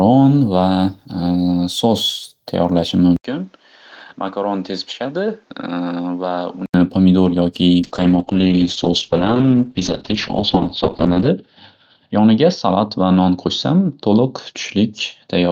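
At 3.16 s the speech breaks for about 80 ms, then comes back roughly 10 dB quieter and band-limited, with nothing above 7.6 kHz, a boxier tone, and a new noise floor sitting around 35 dB under the speech. It stays that way until 6.74 s, when the fuller sound returns. This is most likely the input switched to a poorer device, a second microphone or a headset's call profile with its own narrower response, gain and self-noise.

From 7.8 s to the end of the clip, a call bitrate drop degrades the speech. The top end collapses from a full band reaching 20 kHz down to about 8 kHz, so the voice turns muffled, and coarser coding adds a rough, watery texture. The worst stretch lasts about 3.5 s. The change fits the encoder falling from around 32 kbps to roughly 7 kbps after the bandwidth estimate dropped.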